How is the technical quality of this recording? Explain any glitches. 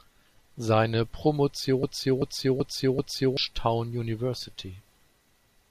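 The recording has one clear glitch, a broken-record loop, from about 1.83 s to 3.37 s. A fragment of speech about 384 ms long plays four times in a row, each copy identical and butted directly against the next, after which normal playback resumes. The likely cause is a stall in the player, encoder or stream that kept re-sending the last chunk it held, so whatever should have been heard in that stretch is missing. Unlike an echo, the repeats don't fade or overlap.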